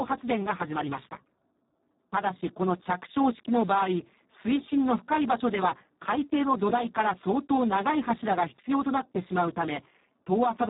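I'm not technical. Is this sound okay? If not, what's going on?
No. The whole speech clip runs through the Speex codec at a very low quality setting, so it sounds noisy and hoarse, not just muffled like an ordinary phone line.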